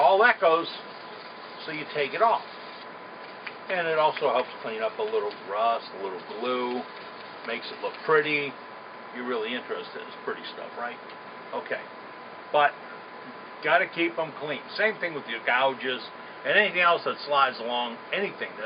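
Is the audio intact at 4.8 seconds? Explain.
Yes, the audio is intact at 4.8 seconds, with no dropout, click, distortion or other fault at that point.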